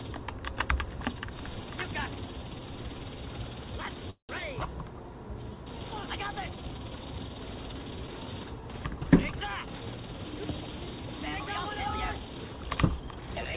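At 4.10 s the sound stalls for about 0.2 s, until 4.31 s, in what sounds like a call audio freeze. Packets were likely held up in transit, draining the jitter buffer. The receiver stretches the last sound into a brief fading buzz or hiss, then about 120 ms of silence, with everything confined below 4 kHz by the G.711 A-law path. Unlike a packet-loss dropout, nothing is skipped: the audio resumes exactly where it stopped, just 188 ms later.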